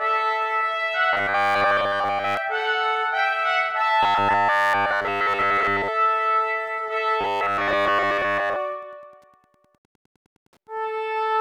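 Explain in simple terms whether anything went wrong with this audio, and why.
Two things went wrong. Throughout the clip there is Wi-Fi interference. A Wi-Fi radio sitting close to the audio circuitry sends out a short signal every 102.4 ms, and the circuit picks up each one and turns it into sound. You hear this as a faint, steady ticking about ten times a second, running under the audio from start to finish.

There are also three stretches of robotic sound from repeated short buffers, at 1.13 to 2.37 s, 4.03 to 5.90 s and 7.21 to 8.56 s. The likely cause is that new audio was arriving too slowly, so the system kept replaying the last tiny chunk, about 10 ms long, to fill the gap. Most of the real sound in those stretches was skipped. The constant repeating creates a rigid, metallic 100 Hz buzz that loosely follows the original sound.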